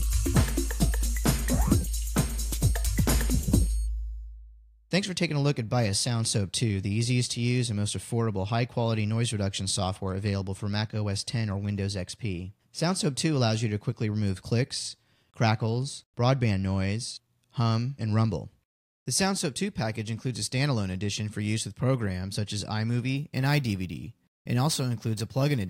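From 23.17 s to the end at 25.69 s, a crude rate conversion adds a gritty, inharmonic fizz, roughly 20 dB below the sound, that tracks loud and bright passages. Samples were repeated without filtering, which fits a 32 kHz to 44.1 kHz change. Unlike clipping, its tones are unrelated to the sound's pitch.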